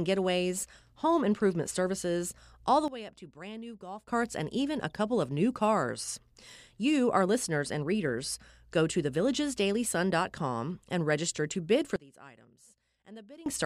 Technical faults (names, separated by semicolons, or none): sudden gain jump